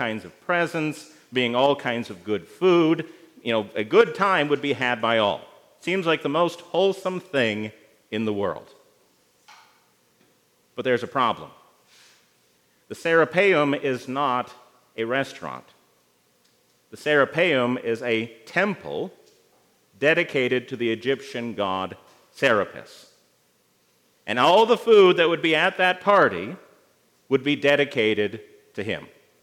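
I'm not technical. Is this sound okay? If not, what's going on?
Yes, this sound is okay. Nothing in it points to a technical problem you'd need to worry about.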